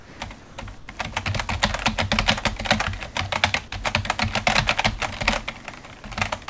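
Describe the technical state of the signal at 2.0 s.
At 2.0 s the sound is intact, with no dropout, glitch or distortion, and its content stops at about 8 kHz, as expected from a G.722 call path.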